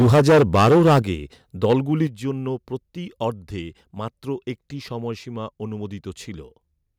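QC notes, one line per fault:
0.00–0.99 s and 1.64–1.75 s, microphone overload: peaks drive about 13 dB past full scale in the first second, with nearly a third of samples flattened, then about 4 dB over briefly at 1.64 s. The squared-off tops give loud syllables a harsh, crackling edge, likely from excessive microphone input gain.
0.02 s, 1.02 s and 2.07 s, microphone volume stepped down: the level drops abruptly by about 2 dB, then about 8 dB, then about 6 dB. Voice and background fall together, likely the call software cutting the device's input volume.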